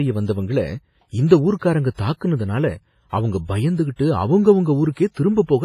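The whole clip has a washy, ringing quality, with hiss that swells and fades alongside the speech and nothing above 15.4 kHz. That points to heavy WMA compression as the likely cause, at a low bitrate around 24 kbps, with long transform blocks smearing the noise.

Pre-echo shows up at 1.59 to 1.62 s, 3.96 to 3.99 s, 4.92 to 4.97 s and 5.11 to 5.17 s: a brief hiss of 26 to 52 ms just ahead of sharp onsets, where block-wide quantisation noise leaks backwards and blunts the attack.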